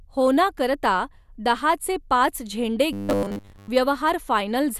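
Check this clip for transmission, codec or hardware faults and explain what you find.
One fault is present. From 2.93 to 3.69 s, right after "पाच झेंडे", the speech turns into robotic sound from repeated short buffers: a rigid, metallic 100 Hz buzz that loosely tracks the words. The likely cause is starved input, with roughly 10 ms buffers replayed in place of most of the missing audio.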